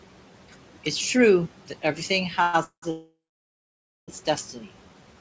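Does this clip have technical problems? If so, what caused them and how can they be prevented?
Yes, there are three kinds of problem.

Noise suppressor artifacts run through the whole clip. The room noise, which sits about 19 dB under the speech, gets pulled down by about 12 dB in the gaps and then comes back up underneath the talking. To prevent it, use a gentler suppression setting or a quieter room so the suppressor has less to fight.

Then there's a run of call audio freezes, likely from packets arriving late and the jitter buffer running dry. At 2.42 to 2.55 s the last sound is stretched out for about 115 ms. At 2.63 to 2.84 s about 190 ms is filled, ending in roughly 100 ms of silence. The big one is 2.90 to 4.10 s, about 1.2 s of fill that decays into around 0.9 s of silence. After each one the speech picks up where it stopped, so nothing is lost, just pushed later. To prevent it, sort out the network path, for example with a wired connection or less competing traffic, so packets arrive steadily.

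Last, a jitter buffer slow-down hits at 4.82 to 5.15 s. The receiver rebuilds its reserve by repeating tiny slices of the waveform, so that stretch plays at about 88% speed with the pitch unchanged, adding around 47 ms and sounding a bit drawn out. It's the same network jitter at the root, so stabilising the connection is the fix here too.

The G.722 codec at 64 kbps caps everything at 8 kHz, which is normal for that path.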